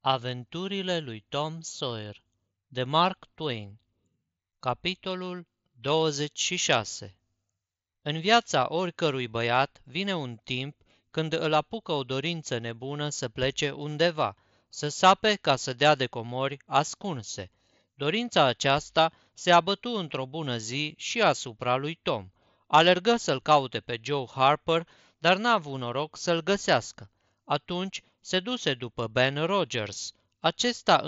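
Nothing stood out on listening to this speech recording.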